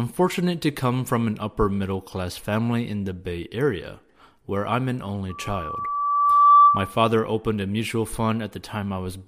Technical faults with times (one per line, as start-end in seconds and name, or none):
5.29-6.98 loudspeaker feedback squeal